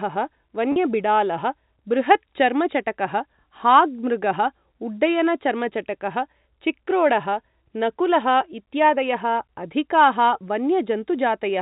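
At 0.72 s, lasting until about 0.76 s, there is packet loss with pitch repetition: roughly 40 ms of audio went missing, which fits two 20 ms packets, and the receiver filled the hole by repeating the last pitch period. Because the gap is shorter than the fade-out, the sound briefly holds with a buzzy, slightly mechanical quality rather than dropping to silence, which distinguishes it from a plain dropout or click. The surrounding G.711 telephone-band audio continues through it.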